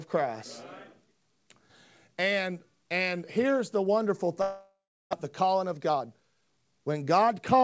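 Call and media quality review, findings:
Long network dropout, 4.42–5.15 s: stream likely interrupted; concealment stretches the last sound into a fading buzz, then 0.36 s silence; about 0.4 s never returns.

Jitter buffer speed-up, 5.25–6.96 s: buffer overfilled after the delay jump; repeated pitch-period cuts remove roughly 0.3 s, speech runs at 117% speed, same pitch, hurried. G.722 band tops out at 8 kHz.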